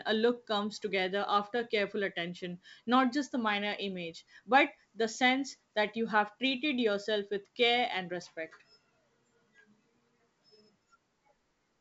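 No faults found: the speech carries G.722 wideband telephone coding at 64 kbit/s, with nothing above 7.7 kHz.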